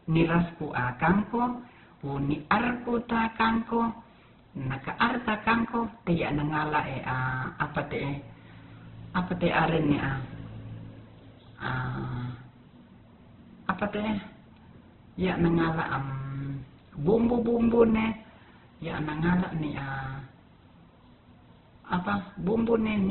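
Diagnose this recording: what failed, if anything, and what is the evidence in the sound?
Codec stage, likely Opus compression: the speech is rough and grainy throughout, with nothing above 4.2 kHz. A spectrogram shows a hard ceiling over noise-filled bands.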